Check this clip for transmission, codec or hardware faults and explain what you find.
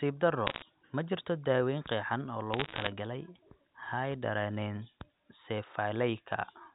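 Bit errors on a digital phone line appear twice, at 0.47 to 0.62 s and 2.52 to 2.88 s. Flipped bits, at roughly one error per hundred in the first burst and fewer in the second, corrupt single samples of the A-law telephone coding. They produce brief crackling ticks over the speech.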